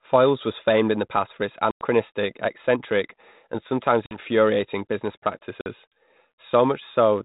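Packet loss on an ADPCM call cuts hard-edged silent holes at 1.71 to 1.86 s (after "the past for its", before "eccentric and sometimes"), at 4.06 to 4.18 s (just after "eccentric and sometimes") and at 5.61 to 5.67 s. The holes drop about ten, then about five, then about five packets' worth of audio. The receiving decoder's adaptive predictor and step size lose track of the sender's, so speech resumes slightly distorted before settling. The light telephone-band grain fits 32 kbit/s G.726.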